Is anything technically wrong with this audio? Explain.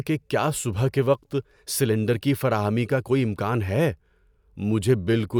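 No, nothing technically wrong can be heard in this speech recording.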